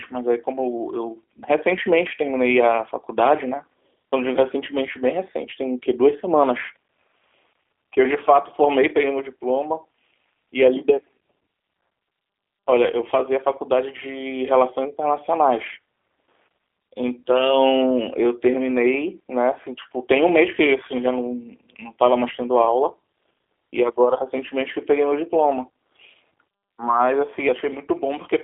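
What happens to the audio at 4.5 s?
At 4.5 s, as throughout, the speech has G.729 codec damage: rebuilt from a vocal-tract model and sparse pulses, it sounds rough and synthetic, and the spectrogram is empty above 3.6 kHz.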